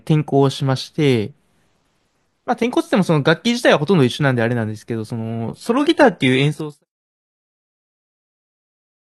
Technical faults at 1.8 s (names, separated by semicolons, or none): none